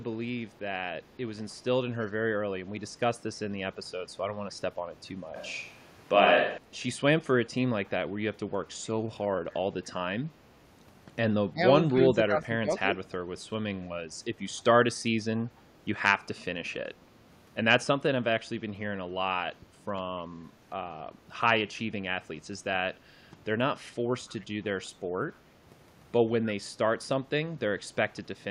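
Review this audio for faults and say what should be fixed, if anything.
From 5.36 to 6.58 s the speech turns roomy and hollow with less bass. The level holds roughly steady, and room noise sits around 35 dB below the voice. That's likely a switch to a distant microphone after the close mic dropped out. Keep a backup lavalier or monitor the close mic's feed so it never goes silent.

Speech dips three times: at 11.52 to 11.6 s by about 20 dB, at 12.05 to 12.69 s by about 15 dB, and at 19.61 to 19.66 s by about 10 dB. This is likely speech suppressed in double talk. The echo canceller couldn't tell this talker from loudspeaker echo and pulled both down. Headsets on the loudspeaker side would prevent it.

At 24.29 to 24.45 s a delayed copy of the voice comes back about 292 ms late, roughly 30 dB under the speech. That's likely an echo leak, where the far side's canceller let some of its loudspeaker pickup through. 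Using headphones there, or tuning its canceller, would fix it.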